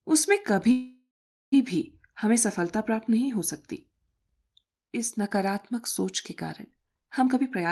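From 0.71 to 1.54 s there is a call audio freeze, likely from packets held up until the jitter buffer ran dry. The last sound is stretched into a fading buzz, then about 0.43 s of silence, before the audio resumes where it stopped. On a spectrogram, smeared horizontal bands thin out into a blank gap. The waveform shows a decaying envelope, then a flat line.

From 7.26 to 7.66 s a jitter buffer speed-up plays the sound about 1.32 times faster at unchanged pitch. Roughly 150 ms was trimmed away as many small pitch-period cuts, so it sounds hurried. Spectrogram harmonics stay level while syllable patterns compress. The band tops out near 12 kHz, fitting an Opus call path.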